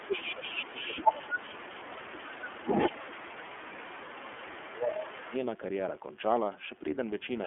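DECT cordless phone buzz runs throughout: a thin 100 Hz buzz, roughly 35 dB below the speech, from a nearby handset's 10 ms radio bursts rectified in the audio circuit.

iLBC codec coloring is also present throughout, with nothing passing above 3.4 kHz. Each 30 ms frame is coded independently, leaving the speech plainly rough and synthetic, which fits a 13.33 kbps mode.

Speech suppressed in double talk occurs from 0.0 to 2.67 s, 2.92 to 3.98 s and 4.29 to 5.34 s. The talker dips by up to about 15 dB, likely because the echo canceller muted both sides during overlapping talk.

Echo leak appears from 0.05 to 4.74 s and again from 4.9 to 5.37 s. A copy of the voice returns 218 ms late, about 10 dB and then about 15 dB down, likely from loudspeaker pickup the canceller missed.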